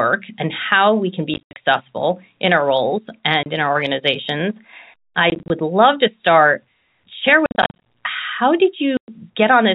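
Packet loss filled with silence chops the speech at 1.34–1.56, 3.43–3.46, 5.3–5.5, 7.46–7.79 and 8.97–9.08 s. Missing packets were replaced by silence, leaving hard-edged holes whose lengths fit 10 ms packets. They show as flat waveform gaps and blank vertical spectrogram strips.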